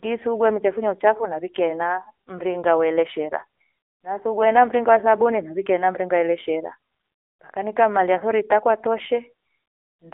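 From start to finish, the speech has passed through the AMR narrowband mobile codec, squeezed through a telephone line band of 300 Hz to 3.6 kHz at 8 kHz sampling. The coder rebuilds each 20 ms frame from a vocal-tract model and a handful of pulses, and the damage is plainly audible: a buzzy, synthetic edge that fits a low rate around 7.4 kbps, with the thin, boxed-in sound of a mobile call and nothing bright above the band.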